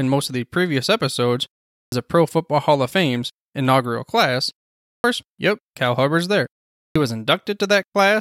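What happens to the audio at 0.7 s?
At 0.7 s the speech plays through intact, with no fault at that moment.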